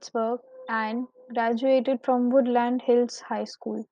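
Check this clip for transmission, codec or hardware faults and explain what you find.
Nothing turned up here, as the speech comes across steady and intact with no transmission, codec or hardware trouble to point to.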